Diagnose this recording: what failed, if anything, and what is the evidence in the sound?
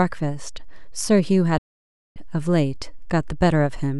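A digital broadcast dropout cuts the speech from 1.58 to 2.16 s. The receiver stopped getting decodable frames and muted within a 3 ms fade until valid data returned. The 576 ms hole, which fits about eighteen 32 ms frames, is lost outright.

A DC offset runs through the entire recording, a constant shift of the waveform away from zero, likely from the analogue or converter stage. It can't be heard directly, but it eats headroom and leaves steady energy at the very bottom of the spectrum.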